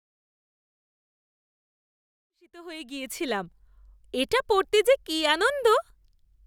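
No technical faults are present in the speech; the fade-in rising from about 2.5 s to full level at 3.78 s is a smooth, editor-style ramp with no click or hard edge.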